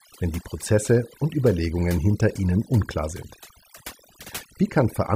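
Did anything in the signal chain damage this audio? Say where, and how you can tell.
Yes: overdone noise removal in the call processing stage, heard throughout, gated bands too aggressively, leaving twinkling specks in near-silent gaps.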